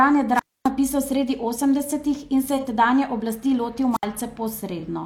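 Speech with two kinds of fault. A wireless microphone squelch dropout hits at 0.34 to 0.70 s, just before "sredi osemdesetih in", and again at 3.92 to 4.05 s, right after "oblasti lotil". Each time the radio link fades, hiss briefly swells, and the receiver's squelch mutes the output to near silence, for about 263 ms in the first case and 65 ms in the second. On a waveform these show as flat near-zero gaps. On a spectrogram a broadband noise smear precedes a blank vertical band before the voice returns. AAC frame loss with concealment appears at 2.57 to 2.64 s and 4.79 to 4.84 s. Both patches are short smeared, noisy or phasey spots where the decoder rebuilt missing audio from the preceding spectrum. Each replaces about 43 ms of lost audio, which fits a single lost AAC frame. A spectrogram shows a thin column with blurred, frozen-looking harmonics and noisy texture. The waveform stays continuous but briefly loses its natural shape.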